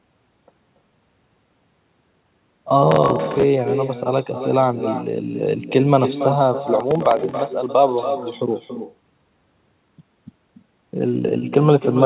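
Speech in which every phrase is trailed by a quieter, thinner copy about 9 dB down and roughly a third of a second late: echo with no canceller, the far end's loudspeaker feeding its microphone back across the call. Between 2.92 and 3.43 s, and again from 6.80 to 7.37 s, gritty crackling tears through the sound. This is processor overload crackle, where missed deadlines repeat stale audio in tiny hard-edged chunks, which fits buffers of only a few milliseconds. The call's narrowband coding also leaves nothing above 4 kHz.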